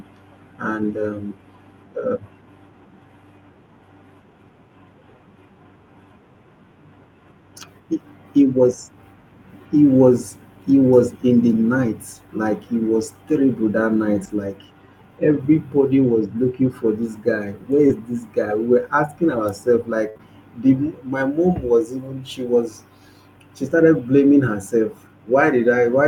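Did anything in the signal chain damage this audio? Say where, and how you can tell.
Yes. The damage happened at the network stage, where the codec covered for it. There are three spots of lost packet rebuilt from error correction: at 0.89 s, at 14.19 to 14.29 s just after "he was terrible that", and at 23.69 s. There is no dropout at any of them. Each one turns briefly rougher and noisier, the first and last for 20 ms. The middle one lasts about 60 ms, which points to a short run of lost packets. The following packets carried low-bitrate copies, and the decoder played those instead.

The network is also behind a patch of scattered short gaps from 17.87 to 20.21 s, ending just before "the my mom was". There are roughly three small holes, the longest around 70 ms, with about a tenth of a second filled in all. You hear brief ticks and smeared hiccups, while the speech stays clear between them. 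Packets arrived late or not at all. The receiver bridged each hole by extending the last sound it had.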